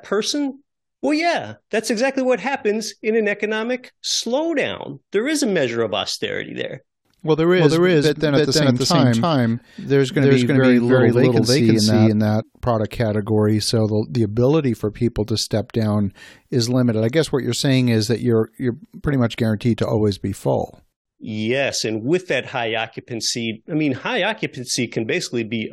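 From 7.56 to 12.42 s the speech is heard twice, a second copy trailing roughly 300 ms behind at about the same level, dry and full-band, cutting in abruptly and dropping out abruptly just before "product category so the". This doubled audio track likely comes from a second, slower capture path.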